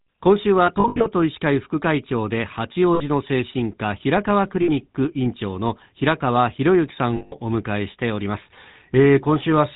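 The whole clip runs through the GSM full-rate codec, and the damage is easy to hear. Everything above 4 kHz is gone, and the speech has that buzzy, gravelly edge you get when a vocal-tract model is driven by a thinned-out pulse excitation. That sound fits the old 13 kbps full-rate coder.

On top of that there are lost GSM frames in four places. From 0.66 to 1.08 s, dropouts scattered over about 400 ms add up to roughly 180 ms of missing audio, with the longest run around 70 ms, which fits about nine 20 ms frames. Shorter hits come at 2.94 to 3.03 s and 4.62 to 4.70 s, each about 60 ms. A bigger one runs from 7.16 to 7.35 s, about 160 ms. Each time, the decoder keeps replaying the last good frame, so instead of a clean gap you get a rough, metallic ring hanging over the sound.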